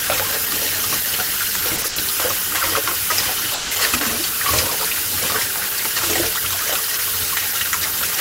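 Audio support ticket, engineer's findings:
Short stall from a late packet at 1.76, 1.82 and 1.88 s, held 20, 20 and 80 ms. Jitter buffer underrun, last sound stretched. Spectrogram shows smeared, repeated frames, no gap.

Call audio freeze, 3.54–3.73 s, 170 ms continued as fading buzz or hiss, then resumes; likely delayed packets draining the jitter buffer. Waveform shows a decaying stretch.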